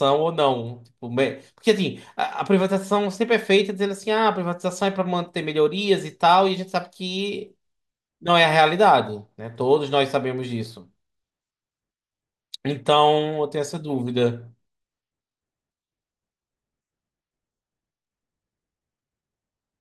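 From 4.26 to 7.9 s the speech carries a 50 Hz buzz from a resampler restarted on every block: each 20 ms block, likely in a 44.1 to 48 kHz conversion, gets an edge error. Unlike mains hum, it disappears whenever the signal pauses.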